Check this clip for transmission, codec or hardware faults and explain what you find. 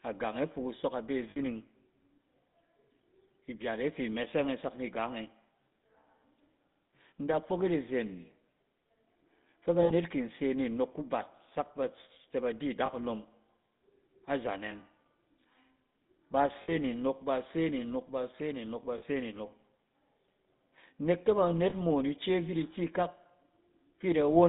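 Two faults are present in this speech clip: GSM full-rate coding throughout, and six short dropouts concealed by the codec.

The GSM full-rate codec damage runs the whole length. The codec models the vocal tract as a filter and drives it with a coarse, regularly spaced pulse train, throwing away most of the excitation detail. That gives the plainly audible buzzy, gravelly grain. The line band sits at about 150 Hz to 3.7 kHz, so there's nothing up top. The sound fits the old 13 kbps full-rate coder.

The lost GSM frames show up at 1.30–1.39 s, 9.82–9.92 s, 12.86–12.90 s, 16.62–16.75 s, 18.98–19.03 s and 21.70–21.73 s. Each gap lasts roughly 20 to 80 ms, and the lengths step in 20 ms units, which fits whole codec frames going missing. The decoder fills each gap by replaying the last good frame's settings. So instead of silence you get a brief rough, metallic ring where the speech should continue.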